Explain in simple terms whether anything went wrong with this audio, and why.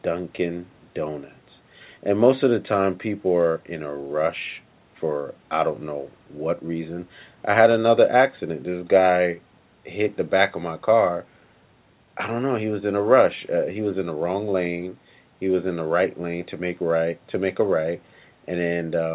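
Nothing went wrong with this speech recording.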